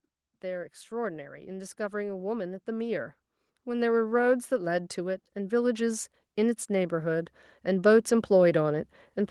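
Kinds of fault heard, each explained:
Automatic gain rising: The automatic gain control judges the input too quiet and steadily raises its gain, so the whole signal, speech and background alike, grows louder together. Here the level creeps upward from about 0.4 s and keeps climbing through to the end.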